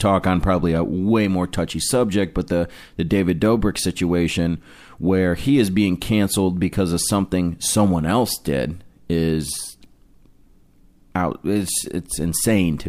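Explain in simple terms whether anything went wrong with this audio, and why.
Nothing went wrong; no problems can be heard here.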